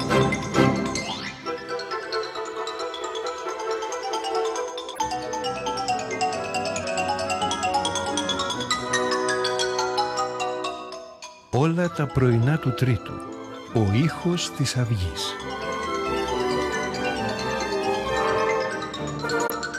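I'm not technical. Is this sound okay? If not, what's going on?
No. There are four short glitches. Each one is a corrupt frame decoded. The sound is stored in small compressed chunks. A few chunks got damaged, but the player still played them. That puts sound in the wrong places for a split second. You hear a quick chirp or blip at 4.93 to 4.99 s, 13.65 to 13.74 s, 16.43 to 16.45 s, and 19.47 to 19.50 s. The last one is clearly the loudest.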